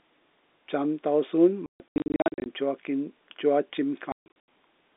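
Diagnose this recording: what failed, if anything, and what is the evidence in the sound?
Network packet loss filled with silence: 1.66–2.46 s and 4.12–4.48 s, hard-edged holes up to 140 ms, in multiples of roughly 20 ms packets, unlike fades from a weak analogue signal.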